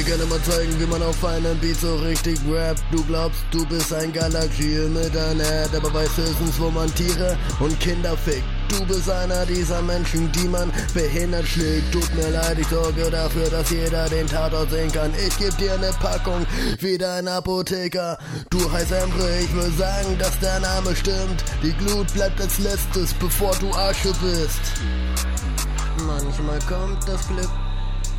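Listening through the whole recording, nothing stood out as a technical problem at any point.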